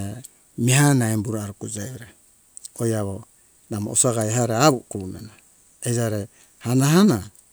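It's a speech clip with a single sharp snap at 4.21 s, a short click that peaks around -10 dBFS. It sounds like an electrical switching spike, likely a nearby switch or motor arcing and getting picked up on the audio line.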